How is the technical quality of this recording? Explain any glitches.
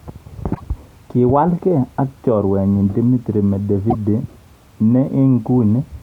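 Two short glitches break into the speech, each a brief chirp, squawk, click or short hole, one from 0.51 to 0.61 s and another from 3.88 to 3.95 s. Both come from damaged data in a compressed stream. In those spots the encoded bytes were lost or corrupted, so the decoder misread the affected frames, lost its place in the stream and had to hunt for the next valid frame header before normal decoding could resume.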